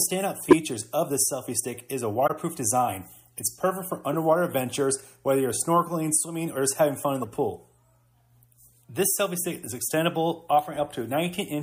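Throughout, plainly audible codec damage gives the sound a watery, swirly character, likely from MP3 compression at a bitrate that fits 64 kbps. With too few bits, weak frequency components get dropped frame by frame, so a spectrogram shows them flickering on and off as scattered holes.

At 0.44 to 0.57 s, 2.26 to 2.31 s and 7.22 to 7.26 s, a corrupt frame decoded: damaged compressed frames were played anyway, so their energy landed at wrong frequencies. Each is heard as a chirp, squeak, blip or noise burst. The first spans several frames and is strongest. The later two cover a couple of frames each, at about 10 and 15 dB lower. On a spectrogram these appear as isolated smears, and on the waveform as short bursts.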